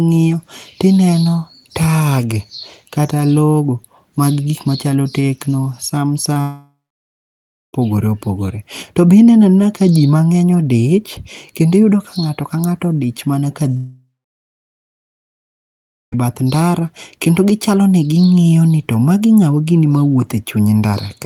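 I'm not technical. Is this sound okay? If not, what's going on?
No. At 6.33 to 6.37 s there is a brief smear in the speech, a tiny wobble where a sliver of sound may vanish. That is short concealed packet loss: a few hundredths of a second of the call arrived too late, and the receiver patched the gap by stretching the sound just before it.

Right after, from 6.41 to 7.75 s, and again from 13.77 to 16.14 s, the speech turns into a fading buzz or hiss and then goes quiet, for about one second the first time and about two seconds the second. When the speech returns, what was said during those gaps is simply missing. This is most likely a long network dropout, where the connection stopped delivering sound for over a second and the receiver could only fill briefly before falling silent.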